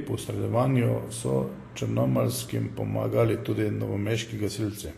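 Vorbis compression, likely, runs through the whole speech clip: nothing survives above 14.2 kHz, and the treble turns hissy and grainy where coarse quantisation has swapped fine detail for noise, with roughened tones and softened attacks that point to a low bitrate around 36 kbps.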